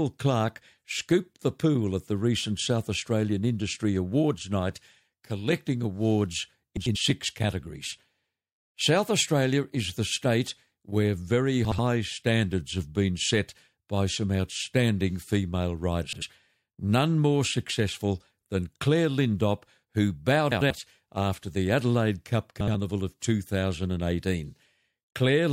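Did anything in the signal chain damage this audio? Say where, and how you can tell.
Yes. Frames out of order, arising in transport (network or storage), at 6.77–6.96, 11.65–11.79, 16.03–16.23, 20.52–20.71 and 22.60–22.74 s. Each stretch plays as a garbled flutter: two adjacent blocks of about 93 ms (70 ms at 11.65 and 22.60 s) are exchanged, which fits runs of three or four codec frames. On a spectrogram, formant and pitch contours break and resume out of sequence. No time is lost.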